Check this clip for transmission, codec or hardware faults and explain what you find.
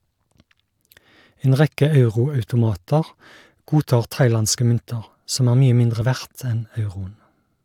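One transmission fault is present, at a segment boundary in the speech.

At 6.02 s, just after "som er mye mindre", an overlap between stream segments removes about 7 ms of genuine audio. The waveform jumps, giving a tiny skip, consistent with 4-second segments.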